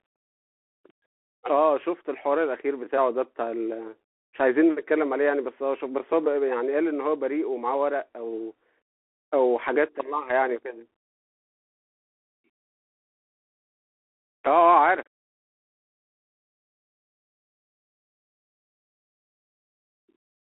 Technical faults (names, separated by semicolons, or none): Bluetooth CVSD headset codec